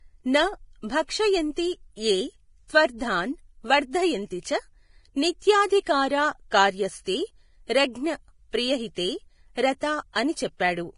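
From the start to the end, the speech carries heavy Vorbis compression damage. Nothing is present above 10.6 kHz, and the remaining treble has a hissy, grainy texture, with tones roughened and consonant onsets blurred. That is likely the result of a low-bitrate Vorbis encode, consistent with roughly 28 kbps, where the codec keeps a smooth spectral floor but quantises the high-frequency residue so coarsely that fine detail turns into noise of similar energy.

At 10.13 to 10.16 s there is pre-echo spanning about 27 ms. A brief hiss comes just ahead of a sharp attack, and the attack itself sounds softened and smeared. The transform block containing that attack spread its quantisation noise evenly across its full length. The noise sized for the loud transient therefore also landed in the quiet stretch before it, where nothing masks it.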